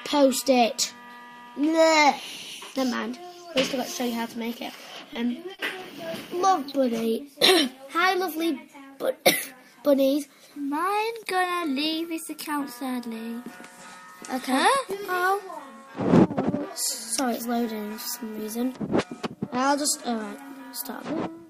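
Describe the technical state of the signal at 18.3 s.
At 18.3 s the signal is intact, with no dropout, distortion, clipping or other fault present.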